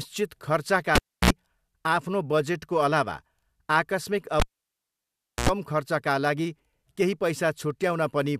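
Speech with a cable pulled and plugged in twice, at 0.95 to 1.30 s and 4.40 to 5.49 s: a pop, near silence for 0.30 s then 1.04 s, then 60 Hz mains buzz for 57 ms and 85 ms, unlike a plain dropout.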